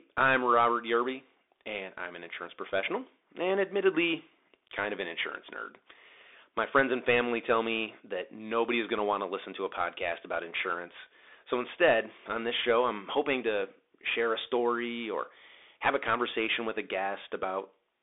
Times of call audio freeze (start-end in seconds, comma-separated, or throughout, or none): none